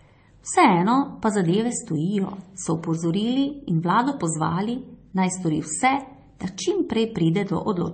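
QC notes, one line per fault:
Throughout: transcoding between lossy codecs. The speech carries two layers of coding damage at once, with nothing above 8.4 kHz. This is likely an AAC chain at about 48 kbit/s re-encoded to MP3 at 32 kbit/s. A single low-bitrate pass leaves only one kind of artefact, but here the MP3 stage wastes bits re-coding the earlier artefacts while adding its own.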